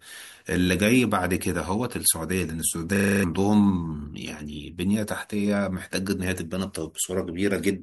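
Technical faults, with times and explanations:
2.96–3.24 s, system hang loop: the playback side stalled while the audio hardware kept cycling one 40 ms chunk of its buffer, so that slice repeats seven times at 25 Hz, a rapid rattling stutter, and about a third of a second of speech is lost.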